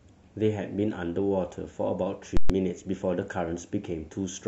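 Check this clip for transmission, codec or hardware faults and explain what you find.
One fault is present. From 2.37 to 2.50 s there are invalid numbers at full scale. A broken calculation pinned the output at one extreme value for 128 ms, fitting a 2048-sample block. You hear loud pops at each edge, silence between.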